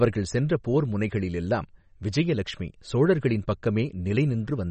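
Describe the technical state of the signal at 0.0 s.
At 0.0 s the speech already carries the damage that runs through the whole clip, most likely from MP3 compression at a low bitrate, in line with around 32 kbps. Short of bits, the encoder cuts everything above 8.3 kHz and drops weak frequency lines that flicker on and off between frames, giving a watery, swirling texture and dulled s sounds. A spectrogram shows a hard flat ceiling at 8.3 kHz and patchy, speckled holes below it.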